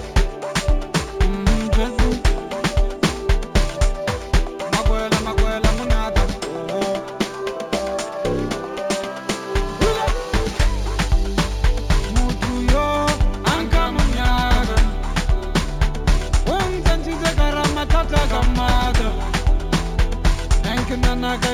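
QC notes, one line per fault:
Throughout: imaging from linear upsampling. The top of the band is dulled, and a faint mirrored copy of the spectrum sits between 8 kHz and 16 kHz, roughly 30 dB below the signal. This points to conversion from 16 kHz to 44.1 kHz by straight-line interpolation between samples, a weak low-pass filter that both softens the highs and lets spectral images through. The images come across as a light metallic shimmer on bright, high-frequency content.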